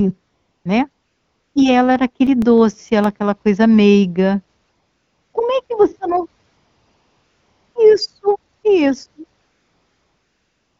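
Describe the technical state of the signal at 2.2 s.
At 2.2 s the speech carries CD scratch ticks, running from 1.96 to 3.20 s, just before "coisa meiga". A scratch defeats error correction once per disc turn. This gives nine brief clicks, the longest about 4 milliseconds.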